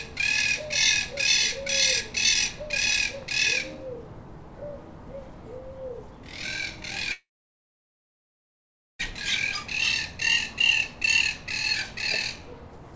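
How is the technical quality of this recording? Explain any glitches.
The recording has one clear glitch, a call audio freeze from 7.12 to 9.01 s. The sound before it stretches into a brief fading buzz, then about 1.7 s of silence, and the audio resumes exactly where it stopped. The likely cause is delayed packets emptying the jitter buffer. Unlike packet loss, nothing is skipped: a gap of about 1.9 s is inserted and everything afterwards runs that much later. The call codec's cut-off leaves no content above 8 kHz.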